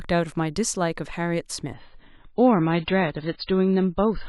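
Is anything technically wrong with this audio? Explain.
Yes. From 1.74 s to the end of the clip, the audio drops to an adaptive stream at a lower bitrate: the player switched to a much leaner version, likely because the connection slowed, and the change is consistent with going from about 128 kbit/s MP3 down to around 16 kbit/s. The speech loses everything above 5 kHz at once, turning dull and muffled with swirly, smeared compression artefacts. The switch is abrupt but seamless, with no gap.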